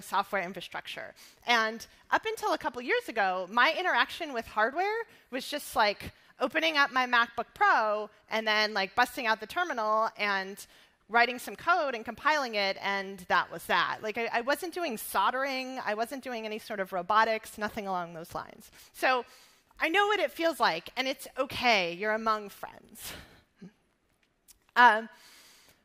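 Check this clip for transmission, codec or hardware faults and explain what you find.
No transmission, codec or hardware faults.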